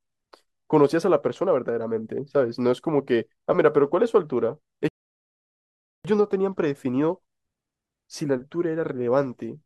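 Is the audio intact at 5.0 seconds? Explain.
No. At 5.0 seconds the speech has stopped for a rebuffering stall. It runs from about 4.88 to 6.05 seconds. The player used up the audio it had downloaded and waited for more to arrive. During that wait the sound drops to silence. Then it picks up exactly where it broke off. No speech is lost or skipped. The pause just adds about 1.16 seconds to the clip's running time.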